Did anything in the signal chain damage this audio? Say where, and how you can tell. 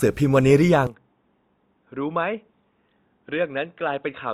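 Yes. Throughout, two different lossy textures blend together with content reaching 20.1 kHz. At the codec stage this is likely transcoding between lossy codecs, WMA at 96 kbit/s re-encoded as Opus at 48 kbit/s.

From 0.87 s onward, the audio turns dull and boxy with no gap. Content stops above 3.8 kHz, the level drops about 10 dB, and a faint new noise floor appears. This points to the input switched to a poorer device, likely at the driver stage.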